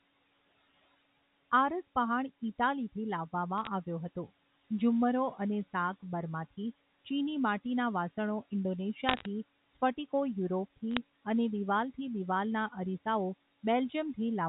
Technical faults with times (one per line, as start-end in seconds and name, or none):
3.58-3.67 bit errors on a digital phone line
9.09-9.26 bit errors on a digital phone line
10.91-10.97 bit errors on a digital phone line